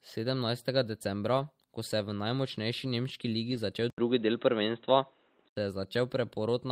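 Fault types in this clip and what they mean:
Lost packet rebuilt from error correction: Packets went missing, but the next packet carried a low-bitrate spare copy. The decoder played that copy, so there is no gap. Instead there is a brief rough, noisy patch. One sits at about 1.37 s, just before "ko se je v", and lasts 20 ms. Another runs from 3.51 to 3.57 s, right after "je v najmočnejši nemški", and lasts 40 ms. Those lengths fit one and then two lost packets.
Input switched to a poorer device: At 3.9 s the sound drops out for 80 ms. It then returns duller and narrower, with nothing above 3.9 kHz. The level shifts by about 5 dB. A new background hiss appears, roughly 40 dB under the signal. This lasts until 5.57 s, just before "se je", where the fuller sound comes back. The likely cause is the system swapping to a narrower-band microphone or a headset's call profile.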